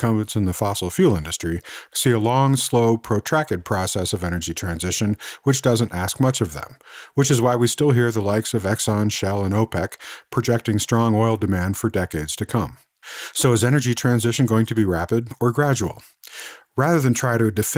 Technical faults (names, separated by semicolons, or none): none